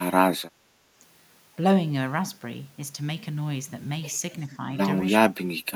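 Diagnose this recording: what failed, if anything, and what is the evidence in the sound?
Speech dips slightly at 4.47–4.56 s, then nearly vanishes at 5.2–5.38 s and from 5.59 s to the end. Likely cause: speech suppressed in double talk, where the call-processing echo canceller, unable to separate talker from loudspeaker echo, turned both down.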